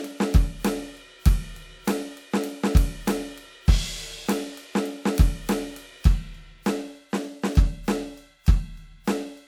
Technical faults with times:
none

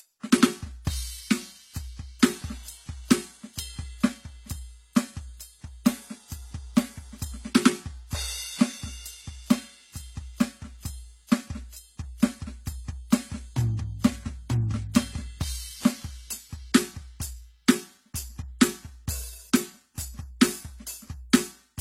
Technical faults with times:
0.00-21.80 transcoding between lossy codecs

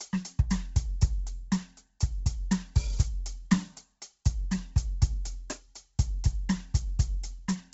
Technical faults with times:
0.00-7.73 Bluetooth LC3 compression

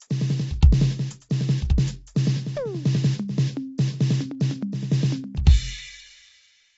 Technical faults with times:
0.00-6.78 low-delay AAC compression
1.29 pre-echo
3.78 pre-echo

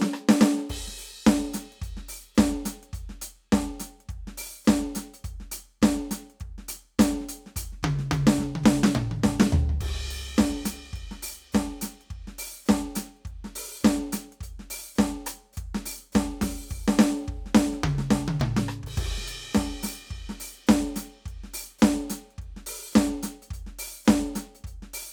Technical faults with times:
none

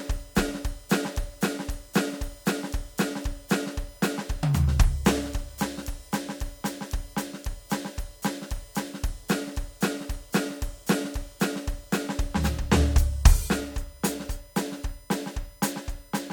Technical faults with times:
0.00-16.32 USB whine

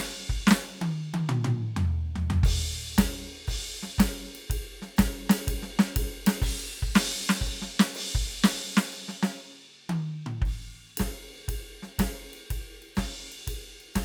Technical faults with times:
none

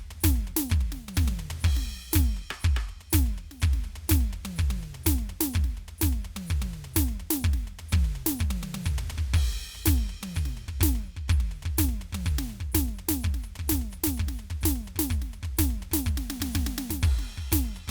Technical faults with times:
none

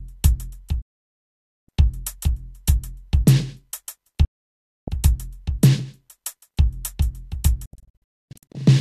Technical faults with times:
0.81-1.69 digital broadcast dropout
4.25-4.88 digital broadcast dropout
7.66-8.60 digital broadcast dropout

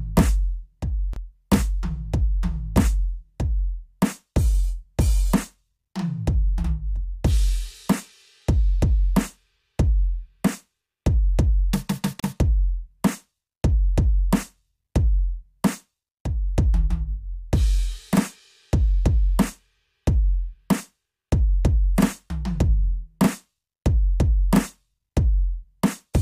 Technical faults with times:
1.13-1.16 gap at a join of encoded pieces
12.20-12.24 gap at a join of encoded pieces

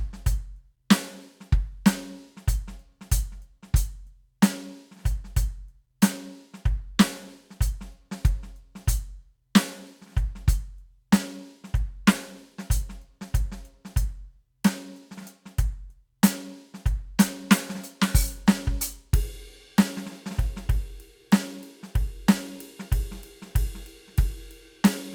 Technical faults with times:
none

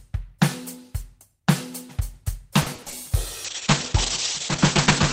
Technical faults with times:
2.61-2.94 repeated packet loss (robotic sound)
3.46-5.12 call bitrate drop

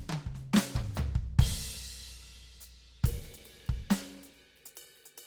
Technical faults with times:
0.00-5.27 Opus compression

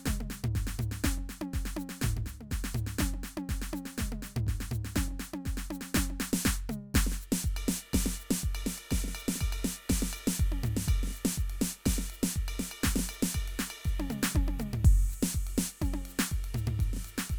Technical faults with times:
none

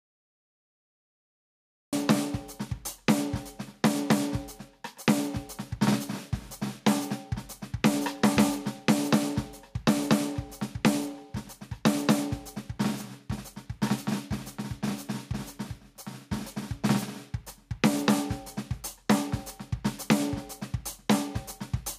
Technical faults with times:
0.00-21.99 gain pumping
0.00-1.93 cut-off start

